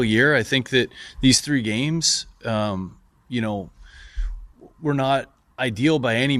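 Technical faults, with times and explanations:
No technical faults can be heard anywhere in the audio. There is nothing to list with a time or an explanation.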